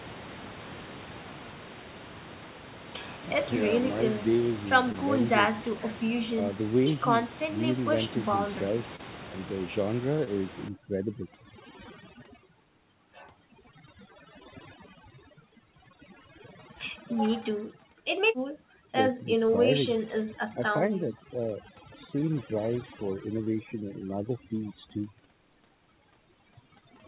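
At 4.92, 8.96, 10.24, 19.47, 23.44 and 24.58 s, short concealed packet loss leaves brief smears where roughly 20 ms of audio went missing and was filled by extending the preceding speech, never with silence or a hard click.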